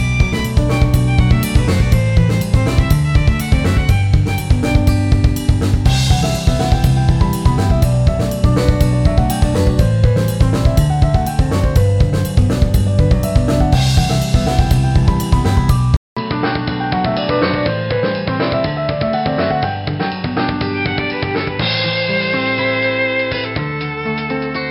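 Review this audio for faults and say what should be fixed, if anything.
At 15.97 s the sound goes dull and boxy after a 200 ms silence, likely an input switched to a poorer device. From there to the end, a spectrogram shows nothing above 5.3 kHz and a new noise floor roughly 30 dB down, and the waveform drops by about 5 dB. Lock the recording input to one device and disable automatic device switching before recording.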